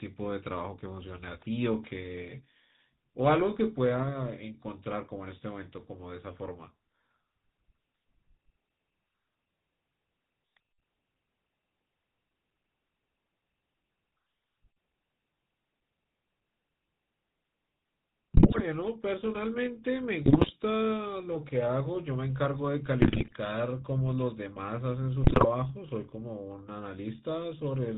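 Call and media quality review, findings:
GSM full-rate codec, whole clip: buzzy, gravelly speech, nothing above 4 kHz. Sparse pulse excitation keeps only every third sample, which fits a 13 kbps full-rate link.

GSM bit errors at 18.34–18.61, 20.26–20.51, 23.02–23.33, 25.24–25.47 s: quarter-second bursts of squawks, pops and gargling. Flipped bits corrupt the decoder's filter, pitch and gain values frame by frame.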